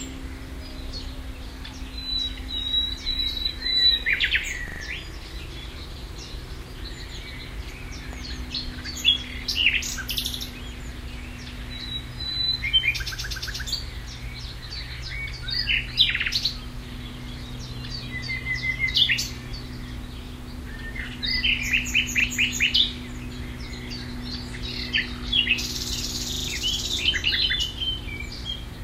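From 4.68 to 4.80 s a repeated buffer is heard: a 40 ms piece of the sound plays three extra times, with a hard join at each restart. New audio did not reach the output in time, so the device replayed its last block. The result is a short, rattling stutter, and roughly a tenth of a second of the sound is lost.

At 8.13 to 8.15 s a single loud pop sits on top of the sound, peaking about 5 dB above it. The sound carries on underneath. The cause is likely a sudden voltage step, such as a switch, a connector or a driver glitch, which the following circuitry shaped into a sharp transient.

The repeated buffer returns twice. At 22.20 to 22.24 s one extra play of the same 40 ms block gives a brief stutter, costing about 40 ms. At 26.32 to 26.48 s four extra plays produce a longer stutter, with around 150 ms of the sound missing. The constant 40 ms repeat length fits a fixed output buffer of that size.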